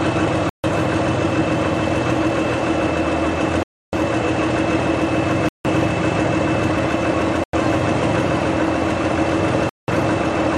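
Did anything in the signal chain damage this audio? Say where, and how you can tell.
Yes, at the playback stage. The sound drops to dead silence at 0.49, 3.63, 5.49, 7.44 and 9.69 s, for between 95 and 298 ms each time, then resumes. This is likely a Bluetooth stall: late packets let the receiver's buffer run dry.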